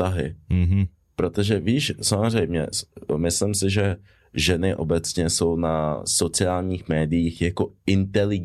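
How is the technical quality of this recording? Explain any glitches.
No technical faults can be heard anywhere in the recording; the signal stays continuous and stable throughout.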